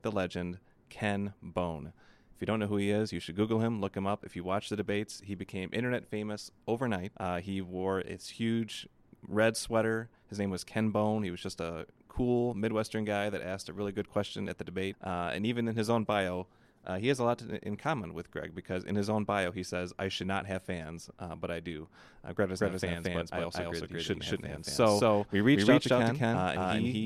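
A speech recording. From 22.60 s to the end, a doubled audio track appears. A second copy of the same sound runs about 200 ms behind the first. It is roughly as loud as the original and full-band. It has no reverb tail or room colour, so it sounds like a hard slapback rather than an echo. It starts abruptly and never stops. The likely cause is a second capture through a slower path, or an edit that left two copies out of step.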